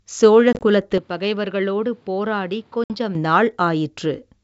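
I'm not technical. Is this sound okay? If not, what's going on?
No. Around 0.53 to 0.63 s, the sound breaks into several tiny gaps, each no longer than 20 ms, and it happens again at 2.84 to 2.91 s, where 60 ms of sound is lost. This is packet loss on an ADPCM call. Pieces of the signal went missing, and the decoder briefly loses track before recovering.

From 0.98 s to 3.15 s the sound suddenly turns duller and a little quieter, with nothing above about 5.7 kHz and faint new background noise, and with no gap at the change. The likely cause is an input switched to a poorer device, such as another microphone or a headset.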